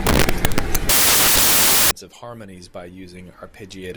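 Samples built from the wrong bytes cover the opening of the clip, from 0.0 to 1.91 s, ending just before "of harmonies by". The reader is assembling each sample with its bytes misaligned or in the wrong order, so the rapidly fluctuating low-order bits land in the most significant positions. The speech comes with loud, hissing noise, close to white on the louder sounds, and the audio clears once correct sample assembly resumes.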